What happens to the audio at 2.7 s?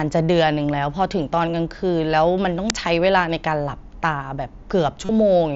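At 2.70 s there is an uninitialised buffer: a block of about 3 ms, which fits a 128-sample buffer, was played before any audio was written into it. Stale memory contents came out as samples, giving a brief, loud crack.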